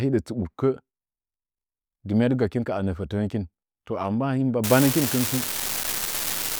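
From 4.64 s to the end, a steady crackling fizz runs under the speech and through pauses: an unreliable data bit flipping randomly, each error a spike of about -10 dBFS.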